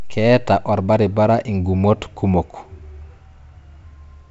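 No technical faults can be heard in this speech, which carries the character of G.722 wideband telephone coding at 64 kbit/s, with any audible trace of that coding at most faint.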